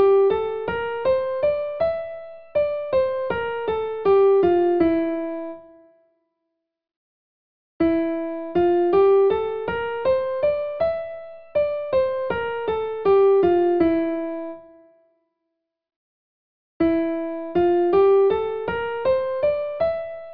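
No technical faults can be heard anywhere in the clip. Nothing in the audio calls for a time mark or a correction.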